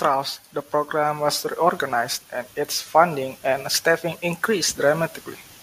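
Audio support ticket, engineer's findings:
Automatic gain rising, 0.9 to 1.89 s, just before "and its funding and". Input-stage AGC judged the level too low and ramped its gain up by 4 dB over about a second. Speech and background noise floor swell together; the level lift is audible as a gradual push forward, not a step.

Sample clock jitter, 3.63 s to end of clip, starting after "and its funding and". ADC clock unstable, with timing error of a few microseconds RMS, so samples land early or late at random. The error tracks waveform slope and sits around 25 dB below the signal: a hiss and roughness riding on louder and brighter speech, dropping out in pauses.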